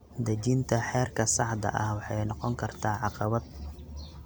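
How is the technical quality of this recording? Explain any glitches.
Nothing to flag here: the speech comes across without any glitches, so there's nothing to explain.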